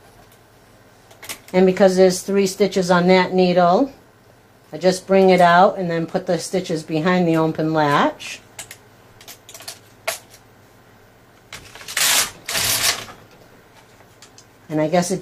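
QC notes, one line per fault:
No faults heard anywhere in this clip.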